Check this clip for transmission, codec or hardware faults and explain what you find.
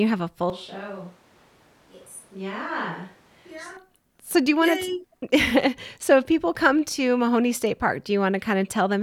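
There's one fault here, a switch to a distant microphone. From 0.5 to 3.77 s, after "have a full", the sound turns roomy and hollow, drops about 10 dB and loses bass, with room noise only about 25 dB down, likely because the close mic dropped out and a far one took over.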